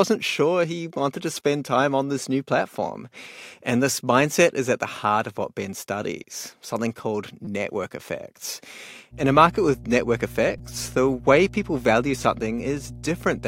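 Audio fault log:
9.10–13.48 s mains hum: a steady 60 Hz tone, about 15 dB below the speech, enters and runs to the end, consistent with power-line coupling through a ground loop or a nearby transformer.
10.58 s repeated buffer: a 5.8 ms fragment plays three extra times with hard joins, heard as a brief buzz. This fits a 256-sample buffer that was replayed because fresh audio arrived late.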